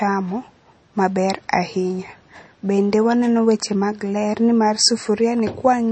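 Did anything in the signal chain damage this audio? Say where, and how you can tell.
Yes. Throughout, the speech sounds watery and swirly, with nothing above 8.4 kHz: likely MP3 compression at the codec stage, its starved bit budget fitting roughly 32 kbps.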